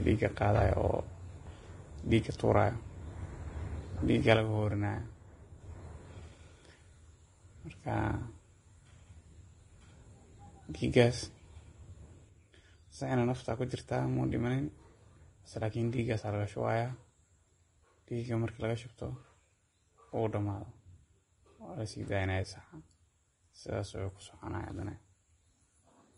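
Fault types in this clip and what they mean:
Vorbis compression, throughout: the speech has nothing above 10.6 kHz and sounds grainy and hissy, with roughened tones and smeared onsets. The likely cause is Vorbis coding at a low rate, around 30 kbps, where coarse treble quantisation turns fine detail into noise.
One channel drops out, 4.36 to 5.60 s and 12.29 s to the end: the level falls abruptly by about 6 dB with no change in tone. The likely cause is one of two identical stereo channels going silent, halving the mono sum.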